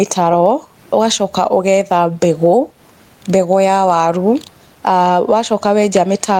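Throughout the speech, the gain is pulled down each time the talker gets loud, with a level swing of around 15 dB. Loud and quiet passages sit unnaturally close together, giving a squashed, pumping quality. This is gain pumping, likely from the input gain being set far too high and a fast limiter or compressor clamping down on every peak. The room noise sits about 45 dB below the speech.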